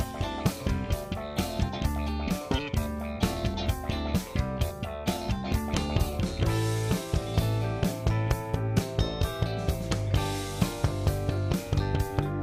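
No technical faults are audible.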